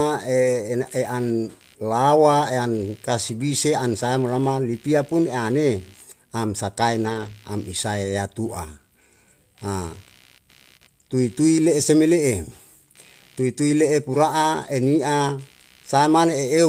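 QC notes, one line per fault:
throughout: computer activity noise. A buzz pulsing at roughly 70 Hz, around 35 dB below the speech, rises and falls with the computer's load rather than with the talking, because processor or peripheral current swings are modulating the audio circuit's shared ground.
2.77–2.83 s and 7.05–7.31 s: lost packet rebuilt from error correction. About 40 ms and then 140 ms of speech turn rough and noisy but never drop out. The decoder filled each loss from the low-bitrate copy carried in the following packet, which fits two and then seven lost packets.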